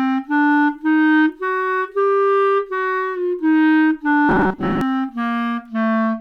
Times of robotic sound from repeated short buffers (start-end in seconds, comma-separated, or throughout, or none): 4.29-4.81